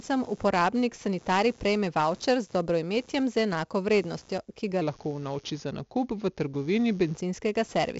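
From start to finish, a buzzing, chirping layer sits under the speech: computer activity noise. Changing processor, graphics or mouse load disturbs the shared ground of the audio circuit, so the interference follows the machine's activity rather than the talker. It pulses at around 150 Hz, roughly 30 dB below the speech, and keeps going through pauses. On a spectrogram it appears as a faint comb of harmonics and flickering streaks, and on the waveform as a low, ragged floor in the gaps.

Throughout the clip the speech also carries the damage of 4-bit ADPCM compression, and it is heavy. Each sample is coded as a small step away from a predicted value, with a step size that adapts. The resulting error is gritty hiss that rises and falls with loudness, and onsets smear and distort because the step cannot grow fast enough. A data rate of about 64 kbps at 4 bits per sample points to a 16 kHz sample rate, so nothing is present above about 8 kHz. 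The spectrogram shows a hard ceiling at about 8 kHz and a noise haze filling in around every loud syllable.

Right after "enako vrednostjo ki ga", from 4.82 to 7.15 s, the audio plays at the wrong speed. It runs at 0.893 times normal speed, so it is slower and roughly two semitones lower, and the talker sounds heavier and more drawn out. This is likely caused by an editor or player applying the wrong clock to that stretch. On a spectrogram the harmonics and formants step down at the start of the section and back up at its end, and on the waveform the syllables in this section are visibly stretched.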